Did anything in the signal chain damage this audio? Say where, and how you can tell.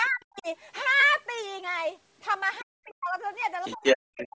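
Yes. At the codec stage, the whole clip shows the signature of Bluetooth LC3 compression, likely at a low bitrate. The upper spectrum of the speech has a breathy, grainy texture where a transform codec has discarded high-frequency detail and filled the gaps with shaped noise. The damage is plainly audible throughout and fits roughly 32 kbps with 7.5 ms frames. Content stops at 8 kHz, which matches the band the call path passes.

In the call processing, the other side's voice leaks through, likely from residual loudspeaker echo that the echo canceller failed to remove. A second voice appears very faintly at 0.04 to 0.24 s and faintly at 2.59 to 2.64 s. From 3.61 to 3.97 s it comes through louder than the talker, and it returns at a moderate level from 4.19 to 4.28 s.

Also in the call processing, speech is suppressed in double talk. When both ends overlapped, the canceller likely could not separate the local talker from the echo and pulled everything down, by around 40 dB at worst. 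The talker dips and breaks up from 0.09 to 0.47 s, from 2.61 to 3.17 s, and from 3.75 s to the end. Each episode lasts roughly a third to half a second, and each lines up with the leak episodes.

On the wireless link, LE Audio frames were lost, and the LC3 decoder concealed the gaps by reusing the previous spectrum with randomised phase. At 1.00 to 1.03 s a 22.5 ms stretch turns into a brief noisy smear, consistent with three consecutive 7.5 ms frames missing. A shorter smudge at 3.42 s fits a single lost frame. In both places, tonal detail in the speech briefly becomes hiss-like before normal decoding resumes.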